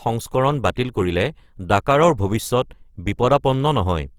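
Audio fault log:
throughout: Opus compression. The speech sounds grainy and rough, its upper bands filled with noisy texture rather than left empty, likely from Opus's CELT mode at around 24 kbps. A spectrogram shows speckled, smeared high bands reaching 20.3 kHz.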